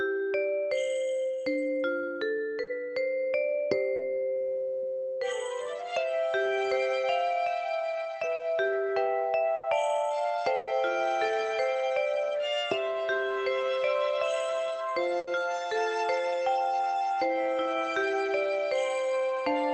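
Short concealed packet loss occurs at 2.63, 3.95 and 8.35 s. Each time, about 40 ms of audio missed the decoder, and the receiver extended the preceding sound to cover the hole before blending back. Each event is a brief smear or wobble, and a short sound can drop out.

A burst of packet loss occurs at 9.55 s (80 ms), 10.55 s (120 ms, the longest) and 15.19 s (80 ms). Several consecutive packets were lost or arrived too late, and concealment stretched and faded the last sound into a held buzz or dying hiss. The audio then resumes with that stretch gone.

Through the call path, the top end stops around 8 kHz.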